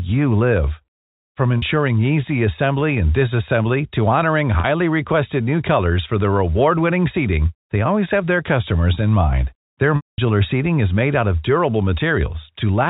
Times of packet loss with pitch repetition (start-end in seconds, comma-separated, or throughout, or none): 1.59-1.62, 4.60-4.64, 9.96-10.18